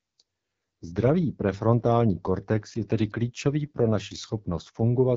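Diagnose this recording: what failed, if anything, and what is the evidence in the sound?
The failure is at the codec stage: the speech has passed through an AMR wideband (HD Voice) codec at a low rate. The damage is plainly audible for the whole clip. The voice sounds rough and raspy, with a buzzy, synthetic edge. Nothing sounds above about 7.5 kHz. The codec rebuilds speech from a pulse-excited vocal tract model and fills only the top band with shaped noise. The harshness fits one of its lowest modes, about 8.85 kbit/s.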